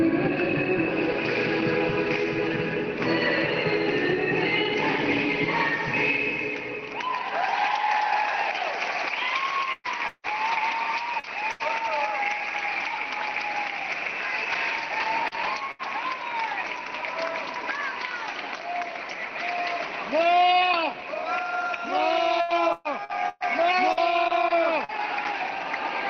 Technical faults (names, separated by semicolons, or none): repeated packet loss (robotic sound)